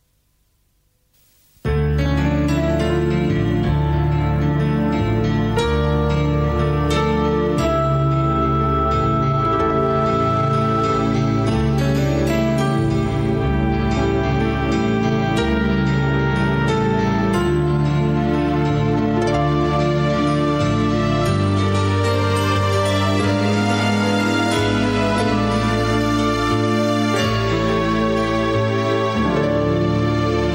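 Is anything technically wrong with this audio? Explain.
No, nothing technically wrong can be heard anywhere in this audio.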